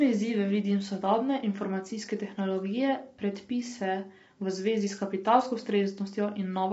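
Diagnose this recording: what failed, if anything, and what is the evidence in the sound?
The codec stage failed: the speech carries plainly audible damage from what is likely low-delay AAC compression (AAC-ELD) for the whole clip. Voiced sounds come across rough and grainy, and nothing survives above 7.8 kHz. The short transform frames resolve the pitch harmonics poorly, so quantisation noise fills the gaps between them. The degree of damage fits a bitrate around 24 kbps. A spectrogram would show blurred harmonic stripes with noisy infill and a flat ceiling at 7.8 kHz.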